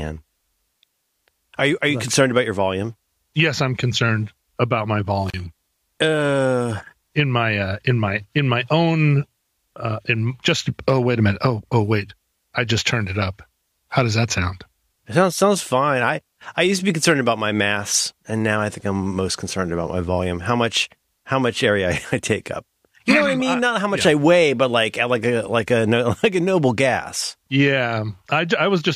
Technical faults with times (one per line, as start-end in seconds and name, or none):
5.28-5.34 intermittent contact